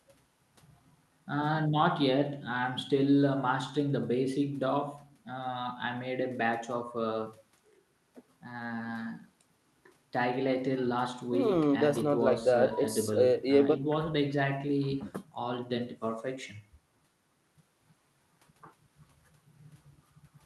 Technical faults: none

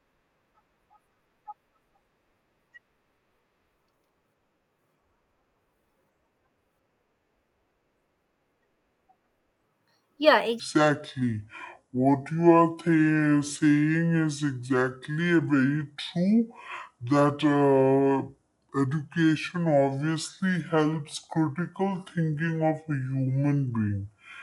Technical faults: section at the wrong speed

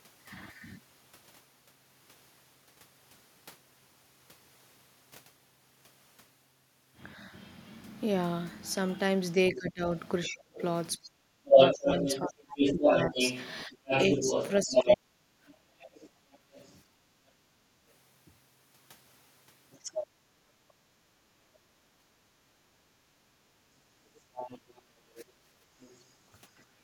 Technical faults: other side's voice leaking through; speech suppressed in double talk; background gated by the echo canceller

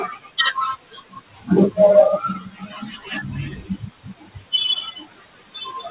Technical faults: noise suppressor artifacts; speech cut by the noise suppressor

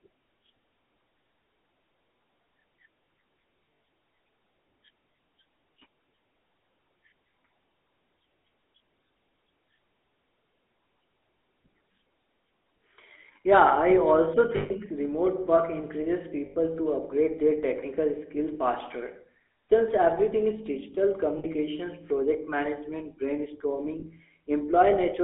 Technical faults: GSM full-rate codec; lost GSM frames

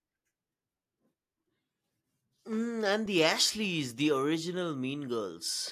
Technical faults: none

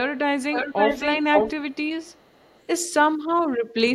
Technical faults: echo leak

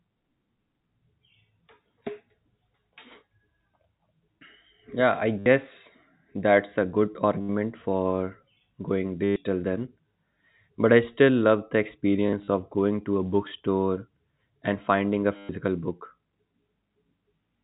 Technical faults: packet loss with last packet repeated

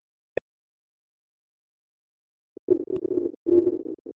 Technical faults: speech suppressed in double talk

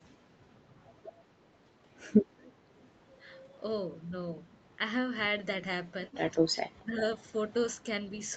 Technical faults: echo leak; speech suppressed in double talk

